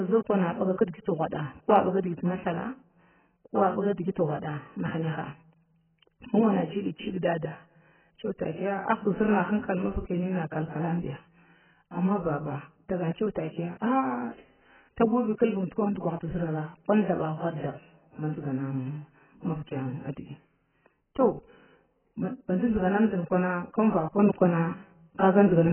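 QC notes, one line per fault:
Throughout: AAC compression. The speech is heavily damaged and band-limited, with nothing above 3.1 kHz, so it sounds dull and muffled. The likely cause is low-bitrate AAC-LC coding; the damage fits a very low bitrate of around 9 kbps. At that rate the encoder lowers its cut-off and quantises each frame's frequency lines coarsely against its hearing model. This removes the upper band and smears detail, leaving a warbling, fizzy texture on sibilants and sustained sounds.
24.19 s to 25.72 s: sudden gain jump. The level steps up by about 6 dB from one sample to the next and stays raised to the end of the clip. Speech and background noise rise together, which points to a gain change applied to the whole signal rather than a change in the source. The likely cause is a digital gain setting or bit shift applied without a ramp, so the change lands as an abrupt step with no fade.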